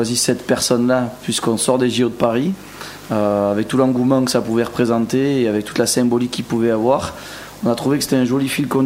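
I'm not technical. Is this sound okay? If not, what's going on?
No. A steady, raspy buzz runs underneath the whole recording from start to finish. This is mains buzz: electrical interference from the power supply, repeating at the 50 Hz mains rate, leaking into the audio through something like a dimmer or poorly shielded cable.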